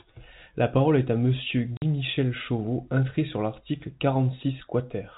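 At 1.77 to 1.82 s there's packet loss filled with silence: a 50 ms hole with hard edges, consistent with five 10 ms packets, over G.711's telephone-band sound.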